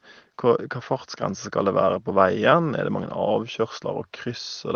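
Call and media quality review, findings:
No faults found.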